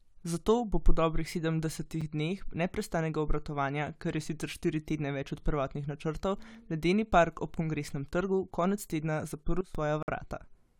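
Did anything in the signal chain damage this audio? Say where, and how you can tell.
Yes, two kinds of damage. The first is a gap between stream segments, somewhere in the streaming or playback stage. At 2.01 s there's a short hard-edged hole of silence, about 8 ms, right before "dneh neprestanega obratovanja kar". A longer one runs from 10.03 to 10.08 s. Both land on 2-second boundaries, which points to segment timestamps not quite meeting, so the player pads the mismatch with silence. Nothing's missing, just stretched with dead air.

The second is a sudden gain jump. From 9.61 to 9.75 s, just after "trgu konec tedna", the speech and the background noise both drop by about 16 dB at once, with a hard step and no fade. Since the floor moves along with the voice, it's not the talker getting quieter. It's likely a digital gain setting in the processing chain being applied instantly, with no ramp.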